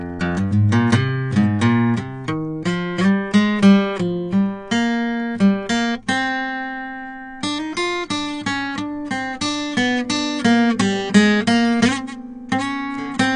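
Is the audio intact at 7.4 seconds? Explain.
No. At 7.4 seconds the music carries the AAC compression damage present across the whole clip, likely from an AAC-LC encode at about 32 kbps. Too few bits force a cut-off near 9.8 kHz and coarse quantisation, so the top is dull and the texture smeared and warbling.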